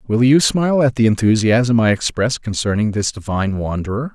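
Speech recording with no technical faults to be heard.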